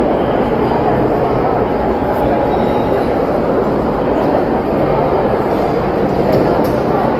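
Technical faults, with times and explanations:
Throughout: generation loss. The sound is swirly, smeared and hollow, with blurred attacks. This likely comes from around ten rounds of lossy re-encoding, which fits Opus at 48 kbit/s. Each pass shifts the frame grid, so quantisation noise piles up.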